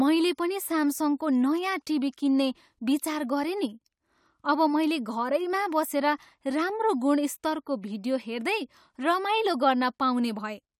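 No technical faults can be heard in the speech recording at any point.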